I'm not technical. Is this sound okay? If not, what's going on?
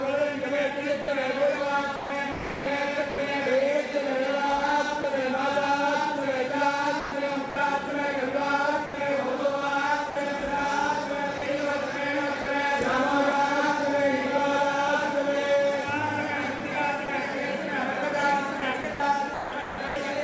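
No. Between 1.02 and 3.18 s, 7.0 and 12.46 s, 16.58 and 17.08 s, and 18.6 and 19.96 s, there's sound chopped by the voice detector. Bits of sound keep switching to a soft artificial hiss, most likely because the sender's detector mistook them for background. At 5.02 s, a brief piece of sound dropped by the voice detector: a tiny moment is replaced by the same hiss.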